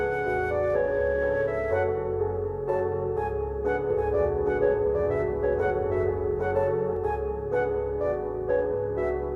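From 3.91 s to 6.97 s the sound plays twice, a second copy trailing about 0.7 s behind at roughly the same loudness, dry and full-band, starting and stopping abruptly. This doubled audio track likely comes from a second, slower capture path or misaligned edit.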